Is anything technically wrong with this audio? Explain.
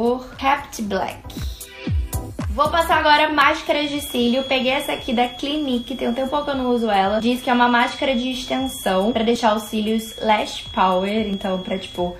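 Yes. At 3.42 s and again at 11.34 s the sound skips abruptly, losing about 20 ms; this is audio missing between chunks, likely from 2-second processing blocks dropping a sliver at each handover.

From 3.55 s to the end, a thin 3.3 kHz tone that slowly swells and fades sits roughly 15 dB below the sound. This feedback whistle likely comes from a speaker-to-microphone loop held just short of runaway.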